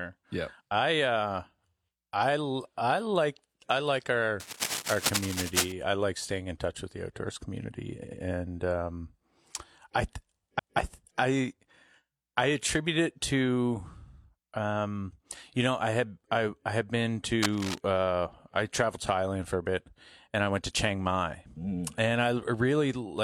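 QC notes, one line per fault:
4.40–5.72 s, cable scratch noise: dense, uneven crackling just below the speech level, likely from a worn cable or connector being moved; on a spectrogram it appears as ragged broadband speckle.
7.99–8.18 s, repeated frames: after "with the outdoors community", a 93 ms slice plays twice more before "and um", adding 186 ms; the waveform shows identical copies.
10.55–10.73 s, repeated frames: a 186 ms block replays once just before "I I", stretching the audio by 186 ms; on the waveform it appears as a duplicated segment.
17.42–17.78 s, cable scratch noise: a short rustling scratch between "I I had been" and "uh I traveled to", likely from intermittent contact resistance, seen as broadband irregular bursts.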